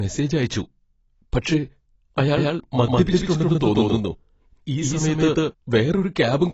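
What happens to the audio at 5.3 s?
At 5.3 s the speech is heard twice, a second copy about as loud trailing by around 150 ms; this doubled audio track runs from 2.37 to 5.51 s, likely an out-of-step duplicate path.

Throughout, the sound is dull and smeared with plainly audible artefacts and nothing above 7.8 kHz, pointing to AAC compression, likely AAC-LC at a low bitrate near 24 kbps.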